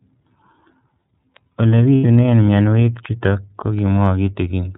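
Throughout, the speech has the band-limited, slightly rough and synthetic quality of the iLBC codec. Nothing above 4 kHz survives, so sibilants lose their edge, and the coding damage is plainly audible as a rough, synthetic texture. The sound fits iLBC's 13.33 kbps mode with 30 ms frames. Unlike a low-bitrate codec that smears or warbles across time, this roughness stays local to each frame, because every frame's excitation is coded on its own.

From 1.95 to 2.05 s, lost iLBC frames leave a gap of roughly 0.1 s, which fits three missing 30 ms frames. The decoder fills the gap by repeating the last pitch cycle blended with noise, so it sounds like a held, faintly buzzy and breathy vowel rather than silence or a click. What sets it apart from concealment in codecs that carry state is the recovery: the voice is right again almost at once, with "mionwek chutok ko", and no lingering distortion follows.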